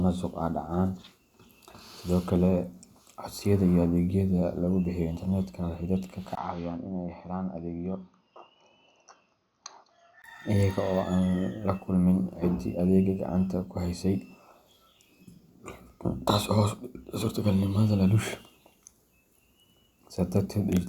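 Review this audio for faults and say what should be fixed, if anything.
From 6.35 s to 10.24 s the speech turns duller and somewhat quieter, likely from the input being switched to a poorer device. A spectrogram shows nothing above 6.5 kHz and a faint new noise floor, and the waveform has a 20 ms gap at the switch. Locking the recording input to one device for the whole session would prevent this.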